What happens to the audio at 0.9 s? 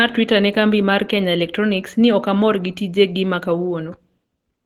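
At 0.9 s the speech carries the same codec damage heard across the whole clip: a hoarse, somewhat muffled quality with grainy, noisy upper bands. This is likely Opus compression, consistent with hybrid mode at around 16 kbps, where a speech coder handles the low band and sparse energy-matched fill covers the highs.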